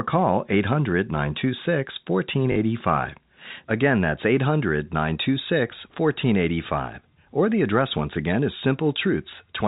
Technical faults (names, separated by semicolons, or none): packet loss with last packet repeated